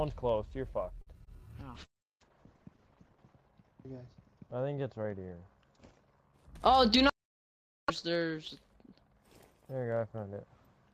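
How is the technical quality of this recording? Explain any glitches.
The recording has four network-related faults in its first seven seconds, all typical of a real-time call path.

At 1.01 to 1.09 s there is a short stall from a late packet. A packet arrived late, the jitter buffer emptied, and the receiver held the last sound for about 52 ms before resuming at the same point. Nothing is lost, but one sound lingers with a faint buzz or dip, and the delay grows by 52 ms.

At 1.25 to 1.29 s a short concealed packet loss occurs. About 20 ms never reached the decoder, so the receiver extrapolated from the preceding audio and cross-faded back. The result is a brief smear or wobble where a fraction of the sound is absent.

From 1.76 to 6.39 s there is a call bitrate drop. The bandwidth estimate fell, and the encoder went from 48 to 8 kbps, narrowing audio bandwidth from 20 kHz to 8 kHz. The sound turns muffled and coarse, worst for about 1.6 s at the bottom, before recovering.

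At 6.48 to 6.97 s a jitter buffer speed-up follows. With surplus audio queued, the receiver trimmed repeated pitch-period-length pieces, roughly a twentieth of a second in total. Playback runs at 107% of normal speed without a pitch change, so it sounds slightly hurried.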